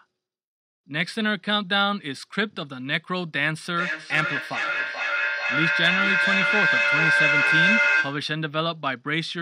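From 3.75 to 8.34 s the speech rings back roughly every 0.4 s, the repeats building to about 4 dB above it: feedback echo between two devices sharing one room.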